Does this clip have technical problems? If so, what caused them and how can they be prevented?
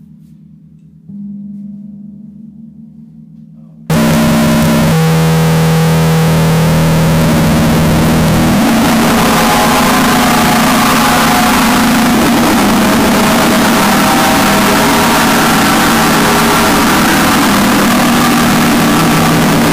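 Yes. From 3.90 s to the end, a float read as integer fault sets in, likely because samples written as 32-bit float were read back as 32-bit integers. The sign and exponent bits then dominate each value, so the waveform becomes nearly square at an almost fixed, high level: very loud and harsh, with background noise raised as loud as the main sound. To prevent it, record the sample format in the file header and make sure the reading software uses it rather than assuming integer data.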